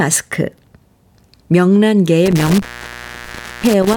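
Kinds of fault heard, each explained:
Intermittent contact: the speech drops out with a crackle at 2.26 s, leaving faint hiss for about 1.0 s, as a loose cable or plug briefly opens.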